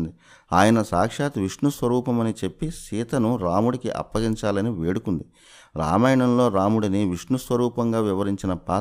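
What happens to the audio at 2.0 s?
Nothing goes wrong at 2.0 s; the audio plays through that moment intact, with no dropout, click or other fault.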